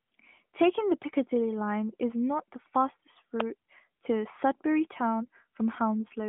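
A nearby switch, relay or static discharge likely arced and the audio line picked up the burst, producing an electrical switching spike at 3.40 s. It lands as a sharp click, about a millisecond long, sitting on top of the speech rather than replacing it. The narrowband mobile path carrying the audio stays intact through the event, so the speech around the click keeps its band-limited telephone quality, with nothing above about 3.8 kHz.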